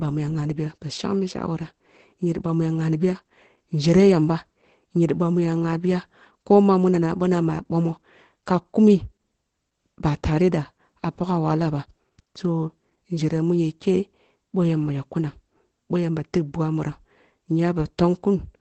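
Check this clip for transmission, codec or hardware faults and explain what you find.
One fault runs through the whole clip: Opus voice compression. Heavy coarse coding points to SILK mode at around 12 kbps. Energy stops sharply near 8.6 kHz, leaving an empty band on a spectrogram. With the excitation coded sparsely, the speech sounds muffled, hoarse and faintly robotic.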